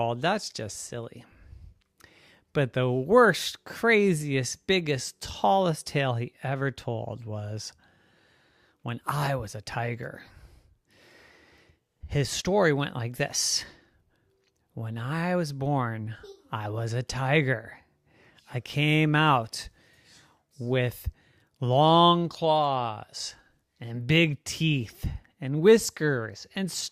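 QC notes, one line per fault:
No fault found.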